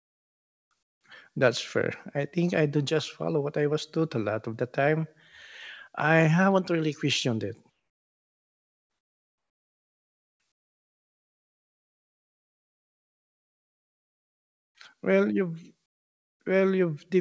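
Comfort noise in place of the background fills the pauses at 0.00–0.71, 0.83–1.04, 7.70–10.40, 10.52–14.75 and 15.86–16.40 s, likely from discontinuous transmission. The real background is replaced by a steady, featureless hiss about 12 to 27 dB quieter. On a spectrogram these pauses show as smooth, textureless bands below 8 kHz, and on the waveform as a low, even floor.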